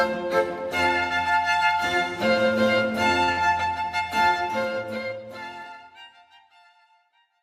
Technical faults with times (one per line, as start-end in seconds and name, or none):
3.23-3.30 short stall from a late packet
3.32-3.39 burst of packet loss